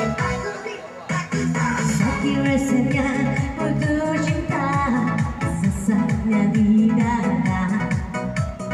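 No technical faults can be heard anywhere in this audio.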